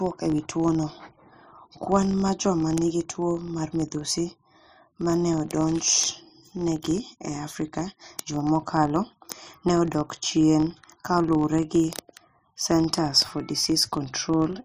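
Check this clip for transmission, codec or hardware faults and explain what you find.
There's one fault, and it runs the whole way through: a filter restarted on every block. The filter forgets its state between blocks and starts each one from silence, so every block opens with a small click. Those clicks land at about 46.9 per second, which fits a 1024-sample block, and they fuse into a low buzz under the speech. The buzz rises and falls with the level of the talking, getting louder on stronger passages and fading in quieter ones.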